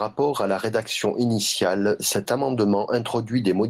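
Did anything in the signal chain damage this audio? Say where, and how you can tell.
Yes: gain pumping throughout. Loud and soft parts are pulled closer in level and the sound is squashed, with a gain swing of roughly 15 dB. The likely cause is input gain set far too high, with a fast compressor or limiter clamping every peak.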